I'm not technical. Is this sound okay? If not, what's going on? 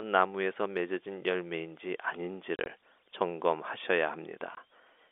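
No. At about 2.56 to 2.66 s the speech stutters, with several tiny gaps, the longest about 30 ms, adding up to about 60 ms of silence, and at 4.55 s there's one more 20 ms hole. The gaps start and stop abruptly, so they can click. This is packet loss filled with silence: pieces of the audio never arrived over the network, and the receiver played nothing in their place. The sizes fit short packets of about 10 ms each. The narrow telephone-call sound comes from normal phone-line coding.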